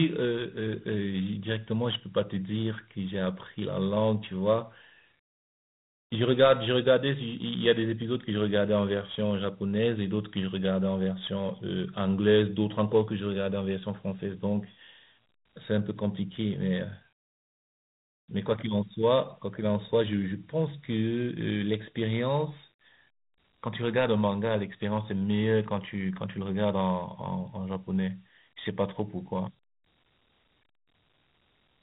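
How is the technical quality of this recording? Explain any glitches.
The quality is pretty rough, with one fault running the whole way through: Dialogic VOX ADPCM coding. Each sample is squeezed into a coarse 4-bit step, which fits a 32 kbps stream, so a gritty hiss rides along with the speech, and nothing survives above about 3.9 kHz, leaving it dull and phone-like.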